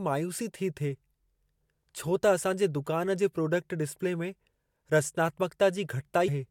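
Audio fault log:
6.27 s, compressed frames skipped. The speech jumps ahead by roughly 150 ms, which points to several whole frames lost or rejected by the decoder.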